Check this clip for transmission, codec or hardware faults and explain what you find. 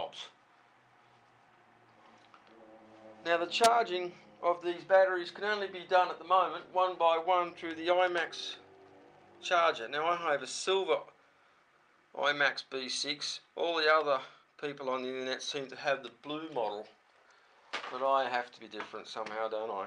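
No transmission, codec or hardware fault can be heard anywhere in the signal, which stays intact and continuous throughout.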